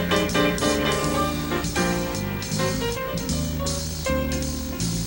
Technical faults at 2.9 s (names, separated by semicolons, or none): video or display buzz